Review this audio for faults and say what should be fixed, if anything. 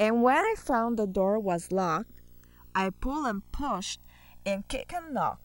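Video or display buzz, throughout the speech: a screen or video cable is coupling into the audio, giving a 59.94 Hz buzz at the picture's field rate with hash above it, a 15.7 kHz line-rate whine, all roughly 30 dB below the speech. Fix it by rerouting audio cables away from display and video lines, breaking the ground loop, or using balanced connections.

Channels drifting apart, throughout: the two channels come from devices on separate clocks that differ by a few hundred parts per million, so the delay between them slides to around a millisecond and a half by the end. Summed to mono, the comb notches sweep slowly, heard as slow flanging. Prevent it by locking both devices to a shared word clock, or by resampling one channel to match before combining.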